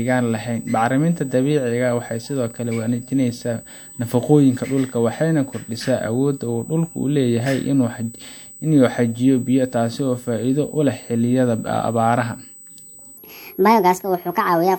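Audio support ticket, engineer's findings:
USB whine, full length of clip: steady fixed-pitch tone at 8 kHz, about 25 dB below the speech. Probable component: USB audio interface power or ground path. The bus's 125 µs microframe current draw couples into the analogue side.

Section at the wrong speed, 13.18 s to end of clip: speech plays 1.44 times fast, pitch raised by about seven semitones, hurried and high. Likely cause: editor or player resampling that segment against the wrong clock, so speed and pitch shift together.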